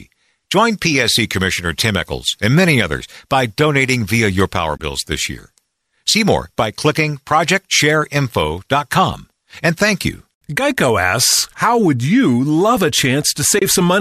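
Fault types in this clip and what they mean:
AAC frame loss with muting: a short run of coded frames never reached the decoder, which filled the gap with silence rather than guessing at the missing spectrum. The overlapping transform windows ramp the sound down and back up, so each dropout is a soft-edged hole of about 30 ms, consistent with three lost frames of a low-delay stream, likely AAC-ELD. It occurs at 4.77 s, between "donating via your power" and "this year", and again at 13.59 s.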